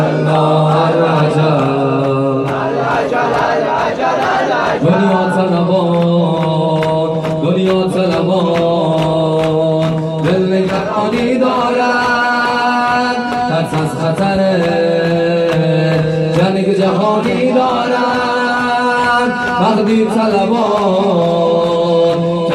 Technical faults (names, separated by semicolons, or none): none